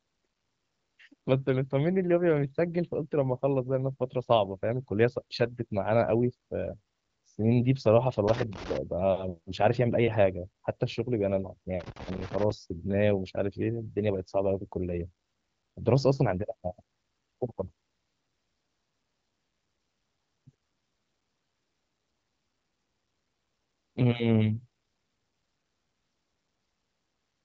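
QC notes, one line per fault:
8.28–8.77 s and 11.80–12.51 s, loose connector crackle: two irregular bursts of scratchy crackle, about half a second and then about 0.7 s long, breaking into the speech. A worn or dirty contact in the signal path is making and breaking as it shifts, chopping the audio on and off, and any DC on the line turns each break into a click. The speech around these bursts carries a wideband phone character topping out near 7 kHz.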